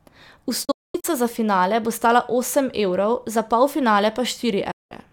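Speech, and it's got a digital broadcast dropout in two places. The first is from 0.65 to 1.05 s, just before "za finale bo stala". The receiver mutes in a few short holes totalling 288 ms, with the longest gap about 224 ms, each cut with a quick 8 ms fade. The second is from 4.71 to 4.92 s, a solid 192 ms hole. Both point to lost or checksum-failed frames, and the audio sent during those gaps is gone.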